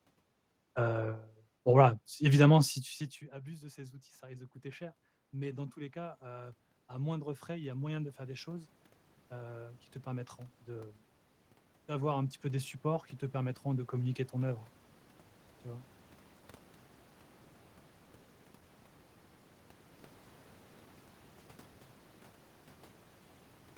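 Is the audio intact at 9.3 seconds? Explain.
No, not quite. At 9.3 s you're in the middle of automatic gain rising, which runs from 3.18 to 10.97 s. The input dropped about 22 dB, so the AGC is slowly pushing gain up by about 14 dB, and the voice and room noise swell together.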